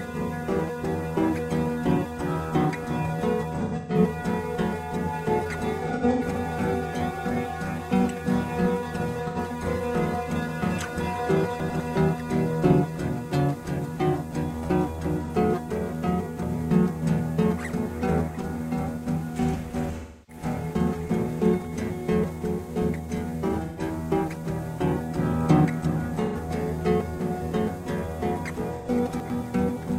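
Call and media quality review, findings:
AAC frame loss with concealment, eight events at 3.55–3.99 s, 5.85–6.22 s, 9.27–9.38 s, 15.24 s, 19.98–20.43 s, 23.65–23.81 s, 26.25–26.36 s and 28.77–28.88 s. Smeared, noisy, phasey patches in the everyday sound. Decoder repeats the last good spectrum with scrambled signs. Losses run about 43 to 300 ms, scattered at 3.55 s and 5.85 s, with runs of roughly 150 ms and 100 ms. The 43 ms minimum fits a roughly 43 ms frame period.

Chunks out of order at 11.6–11.8 s and 29.1–29.3 s. A brief jumbled stretch. Buffering or writer stage placed a 100 ms chunk one slot late. No content is lost, but the swap creates three hard discontinuities per event.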